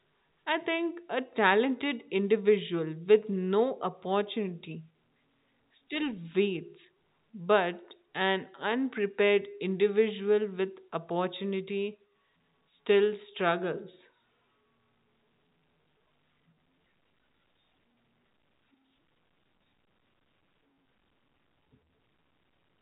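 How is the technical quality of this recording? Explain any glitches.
No faults or glitches heard.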